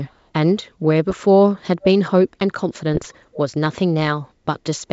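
A very faint delayed copy of the speech surfaces from 0.05 to 0.14 s, trailing the original by about 470 ms and sitting roughly 40 dB below it. That spacing and weakness point to an echo leak, likely from a far end on a loudspeaker whose echo canceller let a scrap of its microphone pickup return down the line.

Short pops and rough, gritty bursts with brief jumps in level break through from 1.10 to 1.16 s and again, longer, from 2.94 to 3.13 s. These are bit errors on an ADPCM link. Each flipped bit corrupts the decoder's step size and prediction, so the disturbance rings on for several milliseconds. Both stretches have a sparse error rate, well under one percent. Here the ADPCM coder is G.722 at 64 kbit/s, which keeps the band up to 7 kHz intact between hits.

At 3.33 to 3.37 s a second echo leak returns with the same delay of about 470 ms. This one is more noticeable, roughly 25 dB under the speech, and is heard as a brief ghost of the preceding sound.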